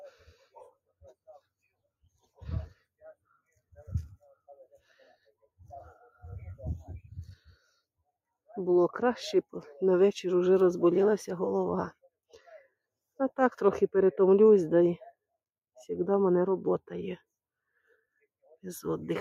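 No technical faults can be heard anywhere in this audio.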